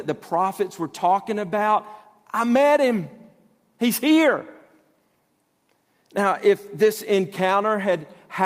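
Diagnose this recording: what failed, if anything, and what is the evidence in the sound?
A network packet was lost and rebuilt from Opus in-band error correction: at 6.85 s the speech turns briefly rougher and noisier for about 20 ms, with no gap.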